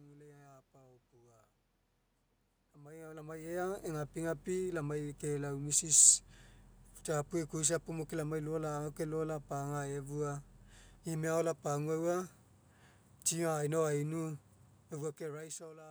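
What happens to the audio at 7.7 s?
At 7.7 s the speech carries on intact, with no dropout, click or distortion, only the room noise that is part of the recording.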